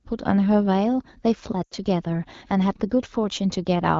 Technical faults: lost AMR speech frames

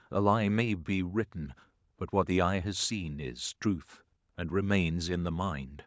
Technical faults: none

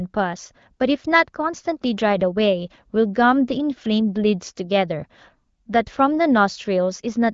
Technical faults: none

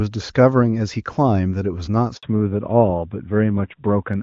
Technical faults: handover gap; fallback to narrowband

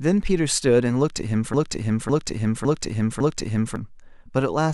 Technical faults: broken-record loop

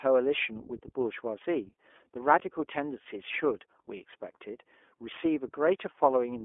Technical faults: iLBC codec; lost iLBC frames

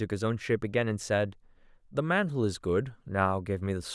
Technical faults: none

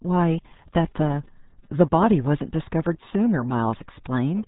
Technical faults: RealAudio 14.4 codec

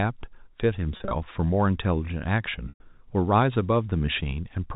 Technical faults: packet loss with pitch repetition

